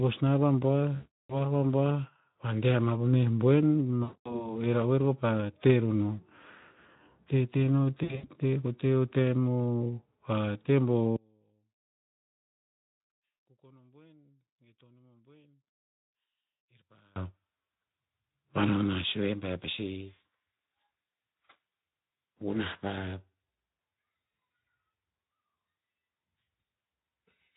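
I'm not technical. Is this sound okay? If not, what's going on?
No. There are two separate problems.

VoIP packet loss concealed by the speech codec happens three times: at 0.95 to 1.45 s, at 4.03 to 4.55 s (right after "ama po meh boen", before "he ra'oer kopa te"), and at 8.03 to 8.29 s (after "te no"). Pieces of the call went missing, about a third of a second in the first gap. The receiving software filled each hole by stretching the last bit of voice into a buzzy tone or a coloured noise that fades, and the voice sounds weak for a moment after it comes back.

From 11.16 to 17.16 s the voice almost disappears, leaving only a faint trace. The likely cause is one channel inverted: one side of the stereo signal is flipped upside down, so when the two sides are combined into one, the voice, which sits equally in both, cancels itself out. The speech compression itself works as intended and adds only slight roughness.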